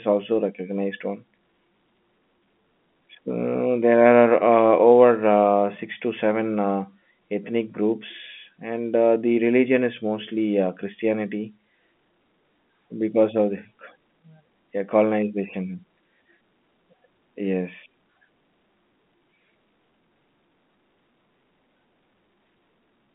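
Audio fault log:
Nothing stood out on listening to this telephone-band speech, which sits within roughly 150 Hz to 3.5 kHz as expected of G.711 coding.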